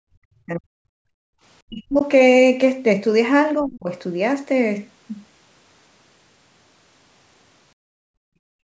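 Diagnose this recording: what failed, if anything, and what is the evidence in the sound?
Speech suppressed in double talk, at 0.08–0.99 s, 1.65–2.03 s and 3.61–3.91 s: the speech drops by up to around 40 dB, likely because the call's echo canceller muted both sides while they overlapped.

Background gated by the echo canceller, at 1.27–1.37 s and from 7.74 s to the end: in call processing, the room sound falls by about 40 dB and then by about 36 dB while the microphone is held down during loudspeaker playback.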